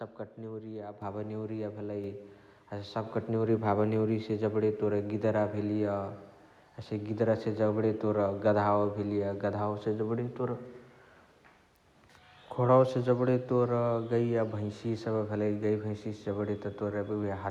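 At 1.02 s the speech and the background noise jump up together by about 7 dB, and at 2.04 s they rise again by about 3 dB. This is microphone volume stepped up: the call software judged the input too quiet and raised the device's gain in abrupt steps.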